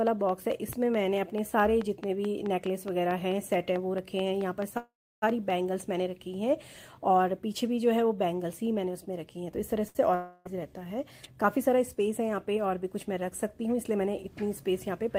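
From 0.07 to 5.51 s a train of clicks ticks over the audio at a regular 4.6 per second, about 20 in all and peaking around 10 dB above the signal. It is likely caused by interference or a faulty connection or power supply. Unlike packet faults, it never interrupts the sound.

From 4.77 to 5.24 s a call audio freeze holds the audio for 447 ms: a fading continuation, then about 320 ms of silence. It resumes where it stopped with nothing lost. This is likely from packets held up in transit.

From 9.88 to 9.97 s a short stall from a late packet stretches the last sound by 68 ms with a slight buzz or dip. It is shorter than the freeze and has no silent stretch.

From 10.15 to 10.47 s a long network dropout likely occurred. A fading buzz or hiss fills 303 ms, and about 300 ms of audio never returns, so the sound jumps ahead rather than resuming.

From 13.59 to 13.94 s a jitter buffer speed-up removes roughly 40 ms in small pieces. 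The audio runs at 109% speed with unchanged pitch, so it sounds hurried rather than gapped.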